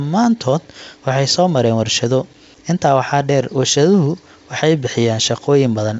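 Nothing stood out on listening to this speech; it carries the band-limited character of G.722 wideband telephone coding at 64 kbit/s, with nothing above about 7.8 kHz.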